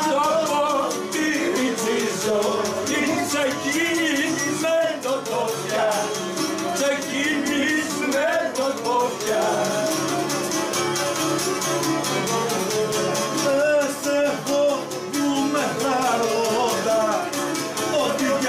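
No technical faults can be heard anywhere in this clip.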